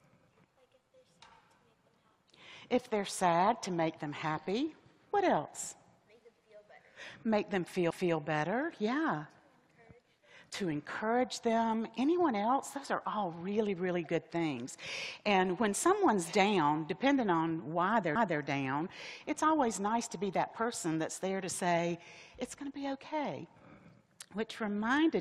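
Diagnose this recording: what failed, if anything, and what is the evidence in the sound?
A quarter-second stutter occurs twice, at 7.91–8.16 s and 18.16–18.41 s, where 250 ms of sound plays again. These are overlapping chunks at the buffer stage: audio handled in 10-second chunks, each starting 250 ms before the previous one ended.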